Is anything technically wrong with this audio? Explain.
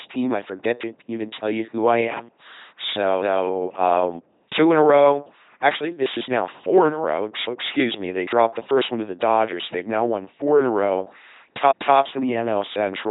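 Yes. The speech has passed through an LPC-10 vocoder for its whole length, and the damage is heavy. Instead of carrying the waveform, the coder keeps only a short set of vocal tract filter settings per frame and excites that filter with a pulse train or with noise, treating each moment as fully voiced or fully unvoiced. The sound fits a 2.4 kbit/s stream: a buzzing, mechanical robot voice, with nothing above 3.8 kHz.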